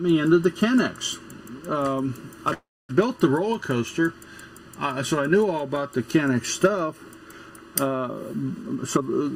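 From start to finish the audio sounds hollow and phasey, with fixed notches that do not move. The first falls around 700 Hz and the rest repeat at even spacing above it. This is channel delay (comb filtering): one channel arrived late by well under a millisecond, roughly 0.7 ms, before the two were summed to mono. Whatever they shared cancelled wherever the delay put the copies out of phase.

From 2.53 to 2.91 s the sound stops moving forward. The last sound is carried on as a fading buzz or hiss, giving way to silence for about 0.26 s. The audio then resumes exactly where it left off, with nothing missing, so about 0.36 s has been inserted. This is a call audio freeze, likely caused by packets held up in transit until the jitter buffer ran dry and the receiver filled the wait.

From 8.63 to 9.28 s the audio rushes along at 138% speed while keeping its pitch, clearly hurried. This is a jitter buffer speed-up. 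The buffer held more audio than its target, so the receiver cut short pieces of one or a few pitch periods over and over to reduce the delay. Roughly 0.3 s of audio was removed across that stretch.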